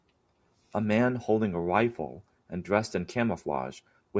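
A recording of speech, with no technical fault to report. Nothing in it calls for a time or a cause.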